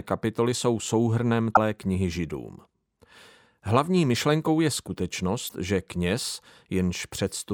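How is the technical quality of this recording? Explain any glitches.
The speech is interrupted twice by brief decoding glitches. At 1.50 to 1.57 s, just after "kapitoly jsou souhrnem", and again at 5.45 to 5.52 s, a short glitch of about 70 ms breaks through. Both come from damaged data in a compressed stream: corrupted bytes make the decoder misread those frames and lose sync until it finds the next valid frame header.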